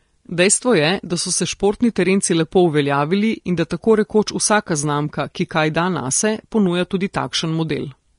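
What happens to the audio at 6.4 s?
At 6.4 s the speech carries the same damage heard throughout: a hissy, grainy treble with roughened tones, likely from Vorbis compression at a low bitrate around 35 kbps. Coarsely quantised detail turns to noise, and a spectrogram shows nothing above 10.6 kHz.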